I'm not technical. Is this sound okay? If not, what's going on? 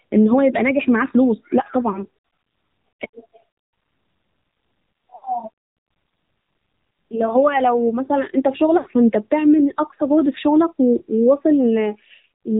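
No, not quite. The whole recording has gone through the AMR narrowband mobile codec, the squeezed format older mobile phone calls use. It throws away everything above 4 kHz, so the speech sounds muffled and boxy, and because it rebuilds the sound from a rough model instead of sending it faithfully, there's a noticeable buzzy, robotic edge all the way through, the classic bad-phone-line sound.

On top of that there are four moments of lost AMR speech frames, where bits of the signal didn't survive the trip and the phone's decoder papered over the gap by repeating and fading what it last heard. Listen around 1.92 to 2.03 s and 10.98 to 11.02 s for a quick blip or wobble, and around 5.16 to 5.24 s and 8.78 to 8.88 s for longer smeared dropouts where the speech stretches, fades and comes back a bit rough.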